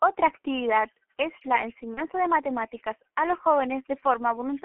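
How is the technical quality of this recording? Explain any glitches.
The quality is poor: heavily coded, narrowband telephone speech with one short dropout.

Throughout, the G.723.1 codec confines the speech to roughly 250 Hz to 3.4 kHz and rebuilds it coarsely, consistent with about 6.3 kbit/s. That makes it muffled and hoarse with smeared consonants, unlike simple bandlimiting, which stays clean.

From 1.94 to 2.05 s, between "actividad es la" and "de matemáticas a los", VoIP packet loss concealed by the speech codec fills a gap that fits one lost 30 ms frame. The decoder extrapolates from the last pitch and filter with fading gain, and the voice stays weak afterward rather than dropping to clean silence.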